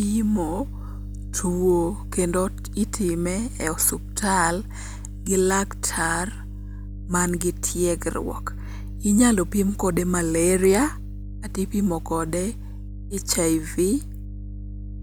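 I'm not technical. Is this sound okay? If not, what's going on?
No. The recording picked up electrical interference from the power supply, called mains hum, which adds a steady, fairly loud 50 Hz low buzz underneath the speech throughout.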